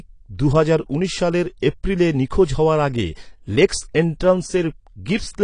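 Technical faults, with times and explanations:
Throughout, AAC compression: likely low-bitrate AAC-LC coding, consistent with 32 kbps, cuts everything above 10.1 kHz and quantises the rest, leaving the speech audibly dull and smeared.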